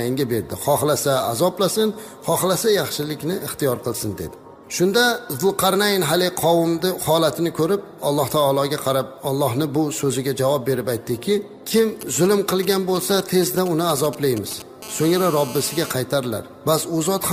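From 11.78 to 14.62 s a galloping dit-dit-dit of ticks and brief raspy buzzes sits roughly 15 dB under the sound. These are GSM signalling bursts: a nearby 2G phone exchanging short radio bursts with the network, which the audio circuitry rectifies into audible pulses at about 217 Hz.

From 14.82 to 15.91 s the ticking gives way to a hard, continuous, harmonic-rich buzz at 217 Hz, about 15 dB below the signal. This is GSM phone buzz: the same phone now transmitting steadily as in a call, its 217-per-second bursts rectified into a constant rasp.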